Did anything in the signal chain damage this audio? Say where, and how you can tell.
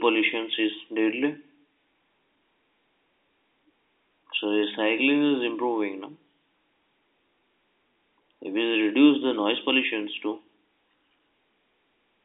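No, nothing in the signal chain has damaged this audio. The speech carries the mark of G.711 telephone coding, a line band of about 250 Hz to 3.7 kHz with nothing above 3.8 kHz, and its quantisation noise is faint at most.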